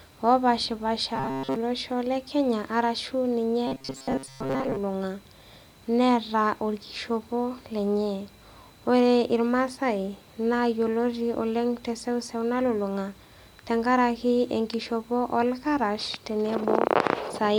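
At 1.16–1.56 s and 3.67–4.79 s there's robotic sound from repeated short buffers: a rigid, metallic 134 Hz buzz, likely from a 7.5 ms chunk looping most of the time.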